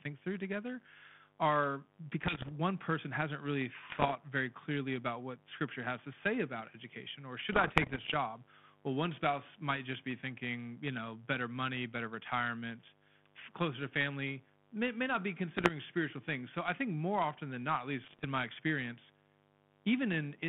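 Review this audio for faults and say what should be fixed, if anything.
Mains buzz runs through the whole clip at about 30 dB below the speech. Sharp switching spikes twice per 50 Hz cycle spread harmonics into the kilohertz range, giving a raspy rather than smooth hum. Fix: shield and ground the cabling, and keep dimmers and rectifiers off the audio supply.

Bit errors on an ADPCM link cause pops and rough bursts with brief level jumps at 2.22–2.52 s, at 3.90–4.17 s between "person hasn't really" and "very clearly about what", at 7.52–8.15 s after "say about education or", at 15.57–15.71 s between "may may not be" and "spiritual things", and at 18.04–18.25 s. Flipped bits upset the decoder's predictor and step size, so each error rings for milliseconds instead of clicking once. That distinguishes them from the steady, level-following hiss of low-rate coding, which the G.726 path here doesn't show. 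Fix: improve the radio link or add error protection on the ADPCM channel.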